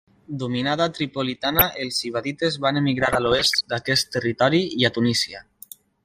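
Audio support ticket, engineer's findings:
Dull, gurgling, granular speech with upper bands flickering throughout; likely MP2 compression starving sub-bands of bits, consistent with about 80 kbps.

DAB burbling at 1.30–1.64 s before "els ibadites van" and 3.00–3.64 s before "d'aquest territori i a". Bit errors corrupt MP2 sub-band levels, heavier in the second burst.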